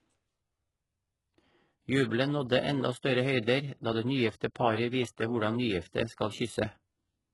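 Throughout the speech, the audio has likely passed through HE-AAC compression at a very low bitrate, which fits about 12 kbps. Only the lower band is coded, and the treble is rebuilt by copying it upward. Nothing remains above 11.5 kHz, and s sounds turn heavily gritty and metallic.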